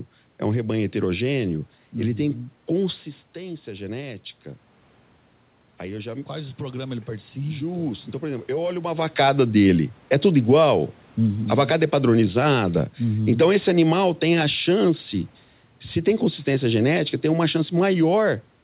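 The speech in this clip goes through automatic gain rising from 5.83 to 9.04 s. The input level drops by about 11 dB, and over those three seconds the gain control slowly adds about 5 dB to compensate, so the level creeps back up. Unlike the talker moving around 3 s and 9 s, where only the voice changes, here the room noise swells together with the voice. That shared, gradual rise points to the gain stage rather than the microphone distance. Throughout, nothing reaches above 4 kHz, which fits a narrowband telephone codec such as G.711.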